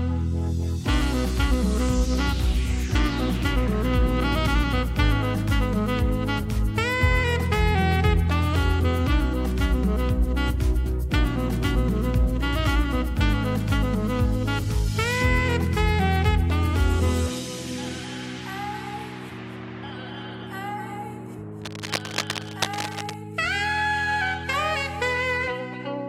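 From 21.61 to 23.14 s a burst of dense, uneven scratching and rustling sits over the sound, fairly loud, only about 10 dB below it. This is cable scratch noise, likely from a worn cable, connector or control being moved so its contact resistance jumped around.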